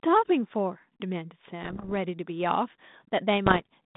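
Bit errors on an ADPCM link strike from 1.63 to 1.93 s and again from 3.46 to 3.62 s, within a narrow telephone band of about 150 Hz to 3.7 kHz whose light coding grain points to 32 kbit/s G.726. Roughly one bit in a hundred flips. Each wrong bit throws the decoder's step size and prediction off course, so the damage rings on briefly as pops and rough bursts with sudden jumps in level.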